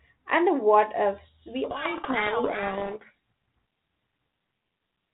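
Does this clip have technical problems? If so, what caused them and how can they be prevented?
Yes. From 1.64 to 3.15 s, just after "and the what ifs", a codec payload misread buries the speech in harsh distortion. The 32 kbit/s G.726 decoder reads each code word in the wrong bit order. So every predicted difference comes out wrong. Configuring both ends with the same G.726 packing order prevents it.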